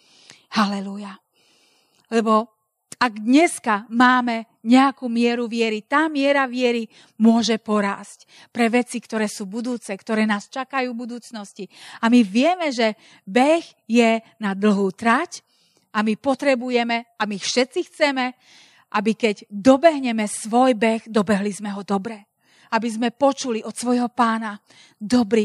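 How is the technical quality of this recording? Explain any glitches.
Nothing in the recording stood out as a technical problem on listening, so there are no glitches to explain.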